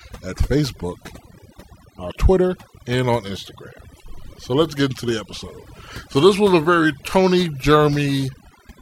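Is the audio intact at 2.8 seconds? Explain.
No. At 2.8 seconds the speech carries overdone noise removal, present across the whole clip. The noise reduction was set too strong. It drops any frequency band near its noise estimate, taking quiet speech detail too. Gaps fall to near silence with twinkling specks.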